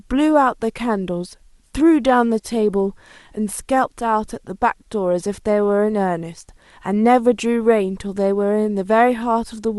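No technical faults can be heard anywhere in this speech recording.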